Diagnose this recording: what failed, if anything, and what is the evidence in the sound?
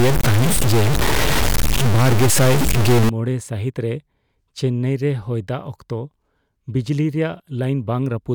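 From the start to 3.09 s the speech sounds harshly buzzy, and pauses fill with loud noise. This is a stuck bit, likely in the converter. A high bit worth around -10 dBFS is held fixed, so about half the samples jump by that step, even near silence.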